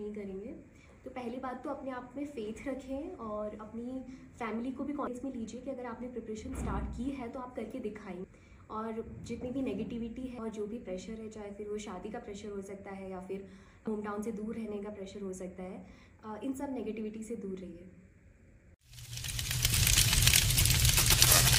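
Five tiny glitches land at 5.07, 8.24, 10.38, 13.87 and 19.73 seconds, each just a few milliseconds long, and they're classic damaged data in a compressed stream. At each spot some of the encoded bytes are bad, so the decoder can't read that stretch cleanly, loses its place and has to hunt for the next valid frame before it picks the audio back up. You hear it as a quick blip or chirp punched into the sound.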